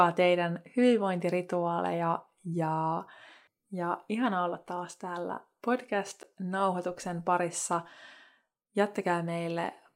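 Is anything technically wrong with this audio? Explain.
Yes. At 6.23 s the speech drops out for a single block of digital silence about 10 ms long. The samples in that span were replaced by silence, which happens when the playback or processing chain fails to fill its output buffer before it is due; a 10 ms gap fits a buffer of a few hundred samples. Because the signal jumps to silence and back with no fade, each edge produces a step, and the whole event is heard as a brief tick or dip.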